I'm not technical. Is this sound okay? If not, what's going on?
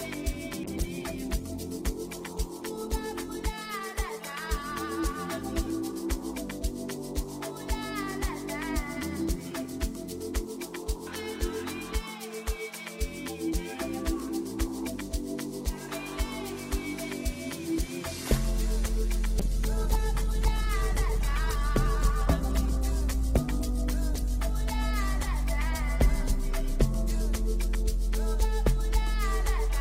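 No. A call bitrate drop happens from 0.64 to 8.53 s and again from 19.41 to 28.71 s. The call's connection seemed to shrink, so the encoder squeezed the sound into far fewer bits. The audio turns rough and muffled until quality recovers.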